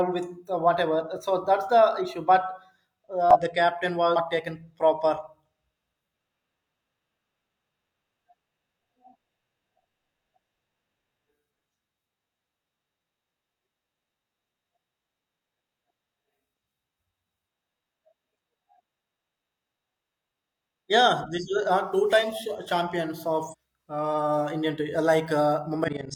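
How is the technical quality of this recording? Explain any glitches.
Damaged data in a compressed stream disrupts the recording five times. Where bytes in the stream were lost or corrupted, the decoder misreads those frames, loses sync and hunts for the next valid frame header, so the speech gives way to a brief chirp, squawk, click or short hole. This occurs at 3.31–3.37 s, 4.12–4.17 s, 8.43 s, 23.49–23.55 s, and for a longer stretch at 25.84–26.13 s, near the very end.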